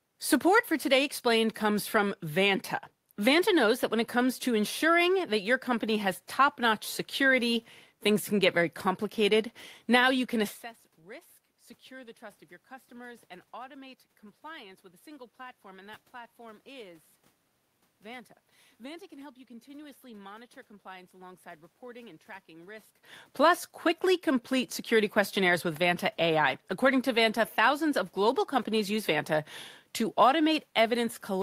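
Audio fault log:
No system faults detected anywhere in the speech.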